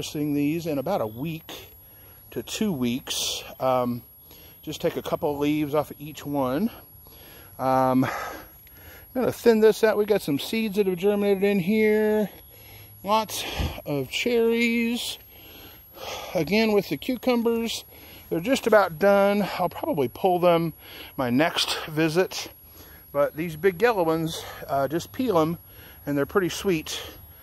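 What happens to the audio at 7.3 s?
At 7.3 s a switching supply whistle sits under the sound, as it does for the whole clip. A switching power supply is cycling at an audible rate, leaking a thin, high whine that wanders between about 11.3 and 11.5 kHz, roughly 25 dB below the main signal. On a spectrogram it appears as a narrow horizontal line drifting within that band. The waveform barely shows it.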